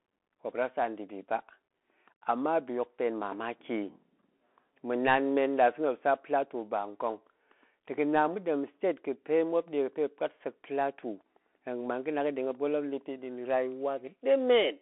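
Speech, heard throughout through a Bluetooth CVSD headset codec. Nothing reaches above 3.8 kHz, and the band sits around 250 Hz to 3.4 kHz. Each sample is a single up-or-down step, which fits a 64 kbps link. The coding damage is plainly audible as a gritty, granular edge.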